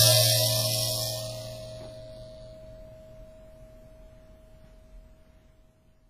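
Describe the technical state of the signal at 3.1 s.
At 3.1 s the music carries heavy codec damage that runs through the whole clip, most likely WMA compression at a very low bitrate, consistent with roughly 24 kbps. Nothing is present above 14.6 kHz. Quantisation noise smears over tens of milliseconds around each transient, giving a ringing, washy texture. Quieter spectral detail has been discarded, and a hiss rises and falls with the level of the music.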